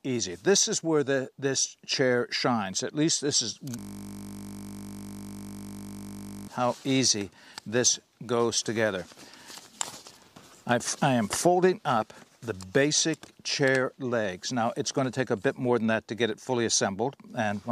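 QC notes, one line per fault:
3.79 to 6.48 s, system hang loop. The audio freezes into a steady 50 Hz buzz for about 2.7 s. A single 20 ms slice repeats exactly, well over a hundred times in a row. The computer or its driver stalled, but the sound hardware kept replaying the same short ring buffer. Because the buffer is so short, the repeats blur into a continuous tone at the loop rate rather than a stutter.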